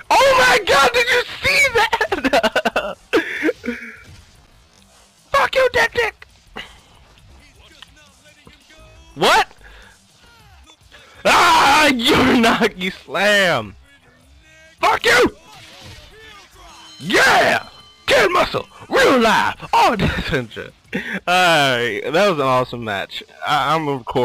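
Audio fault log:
Nothing in the audio registers as a fault. There are no entries to log.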